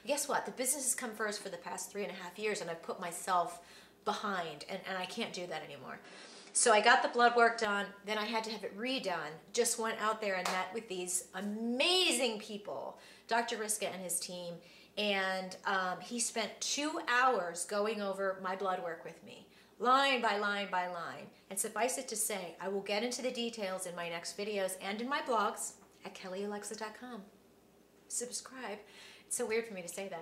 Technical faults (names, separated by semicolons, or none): input switched to a poorer device